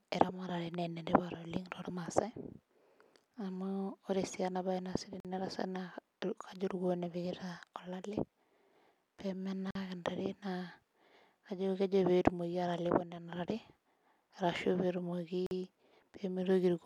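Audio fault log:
5.20–5.25 s, 9.71–9.75 s, 15.46–15.51 s: block of digital silence. Three times the output buffer went unfilled and zeros replaced the speech for about 46 ms, which fits a 2048-sample buffer. Each hard cut to silence and back is heard as a brief hole.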